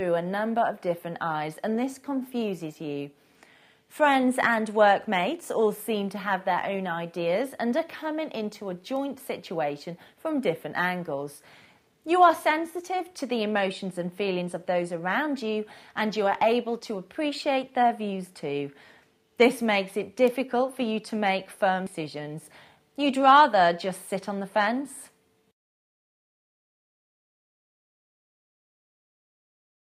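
Bit error spikes occur at 4.53, 8.96 and 20.28 seconds. Each is a single flipped bit in one sample, so the value jumps and returns instantly, heard as a sharp broadband tick.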